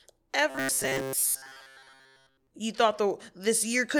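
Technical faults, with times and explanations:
0.50–2.48 s, robotic sound from repeated short buffers: the speech turns into a stiff, metallic buzz pitched at 134 Hz that still loosely tracks the syllables. This is likely because fresh audio was arriving too slowly, so playback kept looping its most recent fragment, about 7.5 ms long, one over 134 Hz. Roughly seven tenths of the sound in this stretch is repetition rather than new material, and the loop rate stamps that fixed, droning pitch over the speech.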